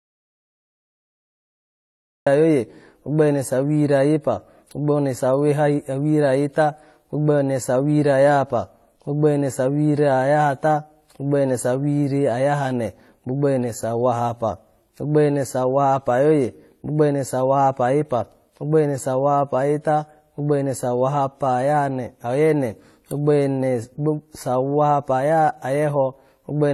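The clip opens in an audio dropout to silence already under way, lasting until 2.27 s. The gap is silent with no room tone, most likely because the input was lost while the encoder kept writing, so the start of the speech is missing.

Throughout the clip, the speech carries layered artefacts consistent with transcoding between lossy codecs, likely a chain ending in HE-AAC. Artefacts from successive encoders stack together, and nothing remains above 16.2 kHz, the lowest cut-off in that chain.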